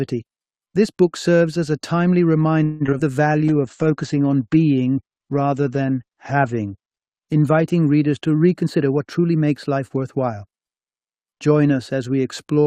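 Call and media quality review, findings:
Choppy, robotic stretch at 2.63–3.01 s, pieces missing. Repeated packet loss: four gaps, the longest 170 ms, about half the span patched by extending the last sound. Receiver-side concealment couldn't keep up with back-to-back losses.

Drawn-out, slightly slowed sound at 3.32–3.85 s, pitch unchanged. Jitter buffer slow-down: playout at 92% speed, 52 ms added by repeating pitch periods to build up a reserve.

Sound turns rough, watery and muffled from 3.49 s to 9.97 s. Call bitrate drop: encoder pushed from 64 to 12 kbps, bandwidth cut from 20 kHz to 8 kHz, bottoming out for 3.27 s. Bandwidth estimate fell, so coarser coding lost the top end.

Hurried passage at 8.62–10.33 s, pitch steady. Jitter buffer speed-up: playout at 109%, around 150 ms trimmed by dropping short pitch-period chunks. Buffer overfilled, likely as delayed packets arrived together, and the receiver cut delay back toward target.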